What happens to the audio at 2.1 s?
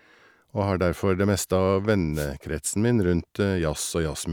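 At 2.12 s there's a wireless microphone noise hit, lasting about 0.16 s until 2.29 s. The analogue FM radio link fades as reflected signals cancel, so receiver noise surges up over the speech, and you hear a quick swish of static.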